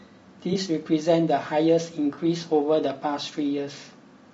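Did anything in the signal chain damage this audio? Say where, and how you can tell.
Yes. Low-delay AAC compression runs throughout at the codec stage: the speech sounds rough and grainy, with noise between harmonics and a thin, synthetic top band. Short analysis frames resolve pitch poorly, and the damage is likely from AAC-ELD near 32 kbps.

AAC frame loss with concealment hits at the network stage, from 0.53 to 0.57 s and again from 2.13 to 2.19 s, each a brief smeared, noisy patch. The decoder rebuilt the gaps from the preceding spectrum, consistent with one and then two missing frames.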